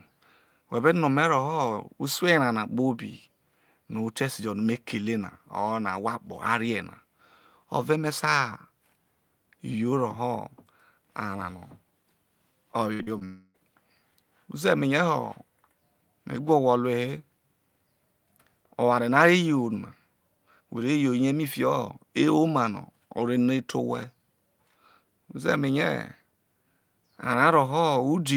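A speech recording with a cluster of network faults between 12.93 and 13.56 s. A burst of packet loss at 12.93–13.01 s removes about 60 ms of audio. The receiver extends the preceding sound for about 55 ms and fades it down, then resumes past the missing section. Two short concealed packet losses follow at 13.03–13.09 s and 13.19–13.23 s, hiding about 40 ms and 20 ms. Each is heard as a brief smear where the decoder synthesises a continuation of the last sound and then cross-fades back into the real signal. From 13.25 to 13.56 s, a fading continuation of the last sound fills nearly the whole 300 ms, with roughly 10 ms of silence before the audio returns further on and that stretch is gone. This is likely a long network dropout.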